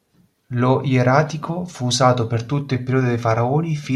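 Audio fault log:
Nothing to flag here; the speech comes through without any audible technical problem.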